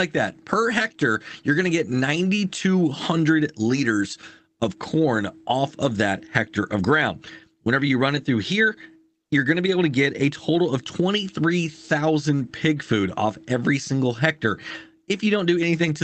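There are no technical faults to describe in time order; the audio passes through the call path as expected.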